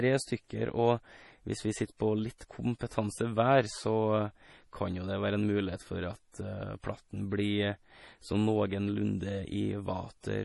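Throughout the speech the sound is watery and swirly, with nothing above 11.4 kHz, consistent with heavy damage from MP3 compression, likely at a bitrate near 32 kbps. From 2.38 to 2.41 s and again from 2.79 to 2.81 s, a brief hiss precedes each sharp onset, softening it. This is pre-echo, where the codec's quantisation noise spreads back before the attack.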